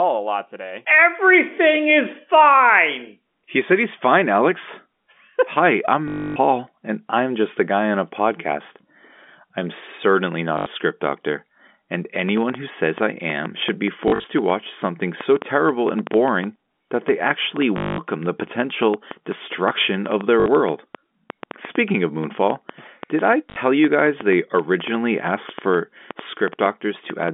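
At 6.08–6.36, 10.58–10.66, 14.08–14.24 (scattered), 17.78–17.98, 20.40–20.46 and 23.50–23.56 s, packet loss with last packet repeated makes robotic stutters, seen as identical repeating blocks and a 50 Hz buzz, which fits 20 ms packets. From 12.29 to 27.29 s, a train of clicks, likely interference, ticks irregularly about five times a second, with roughly seventy sharp vertical spikes peaking around 10 dB above the sound, over the G.711 telephone band.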